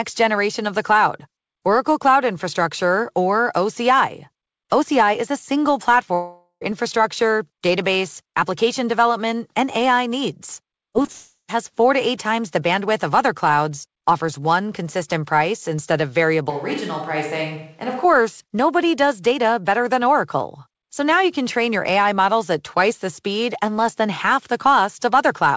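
At 6.14 s, just after "a single", the sound breaks up for about half a second, until 6.63 s. This is likely a long network dropout. No audio arrived for that stretch. The receiver stretched the last sound into a fading buzz for most of the gap. A brief silence follows before the speech returns. The missing part is simply gone.

Around 10.93 s, 11.02 s and 11.06 s there are three quick glitches. Each lasts a few hundredths of a second. These are short concealed packet losses. About 20 ms of audio failed to reach the decoder each time. The receiver papered over each hole by extending the preceding sound, then blended back in. Each one is heard as a small smear or wobble.

The second long network dropout, again likely, follows at once. It runs from 11.12 to 11.50 s, ending just before "four to eight times". Roughly a third of a second is lost. A fading continuation of the last sound fills most of it, then a moment of silence.

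From 16.50 to 18.04 s, between "consistent price instead of" and "nobody does data better", the speech suddenly turns roomy and thin. This is likely a switch to a distant microphone. The level drops by about 5 dB. Room noise rises to about 35 dB below the speech. The change back is just as abrupt.

The G.722 call path limits the audio to below 8 kHz throughout.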